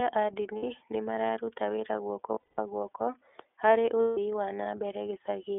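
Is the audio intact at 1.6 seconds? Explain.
No. At 1.6 s, as through the whole clip, the speech carries iLBC codec damage. Each 30 ms frame is coded independently within a 300 Hz to 3.5 kHz band, which fits the 13.33 kbps mode, so it sounds plainly muffled, slightly rough and synthetic.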